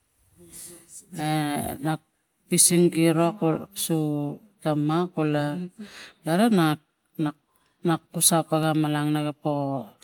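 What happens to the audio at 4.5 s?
Nothing goes wrong at 4.5 s: the speech carries on intact through that moment, with no dropout, click, distortion or other audible fault.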